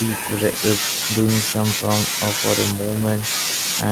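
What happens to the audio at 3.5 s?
Nothing goes wrong at 3.5 s; the speech carries on intact through that moment with no audible fault.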